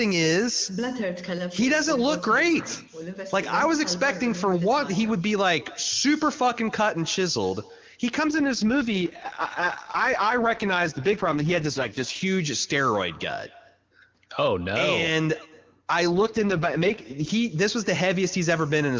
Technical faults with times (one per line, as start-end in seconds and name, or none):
0.00-19.00 echo with no canceller
8.28-12.22 AMR rate drop
16.12-17.30 AMR rate drop